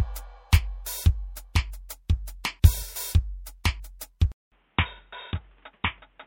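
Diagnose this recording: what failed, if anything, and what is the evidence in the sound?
Damaged data in a compressed stream at the codec stage: corrupt frames from 2.79 to 2.83 s make the decoder lose sync, leaving a brief glitch in the music.

At 4.32 s the input was likely switched to a poorer device. After a 200 ms silence, the music is band-limited below 3.8 kHz, roughly 5 dB quieter, and carries new background noise some 35 dB down.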